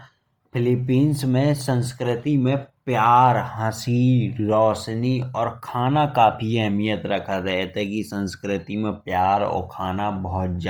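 Throughout the speech, a breathy, grainy edge sits on the upper frequencies, likely from Bluetooth LC3 compression at a rate that points to about 32 kbps in 10 ms frames. A spectrogram shows smeared, noise-filled high bands, with nothing above 20.2 kHz.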